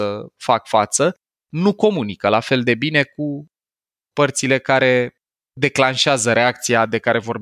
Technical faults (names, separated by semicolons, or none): none